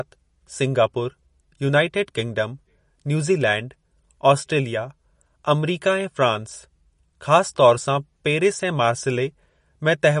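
Throughout the speech the treble stops dead around 10.5 kHz and the sound turns watery and swirly, with smeared consonants, likely from MP3 compression at a low bitrate near 40 kbps.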